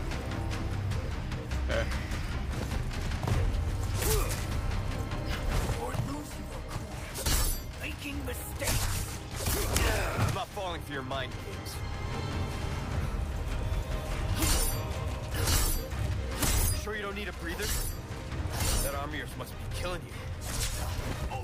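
Nothing is technically wrong with this audio.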